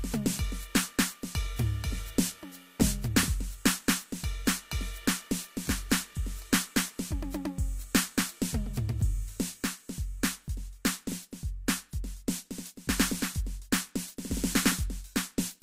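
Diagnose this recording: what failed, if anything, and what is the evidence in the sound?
Nothing in this music recording points to a failure at any stage of the chain. There is no audible event to diagnose, so no stage needs to be singled out.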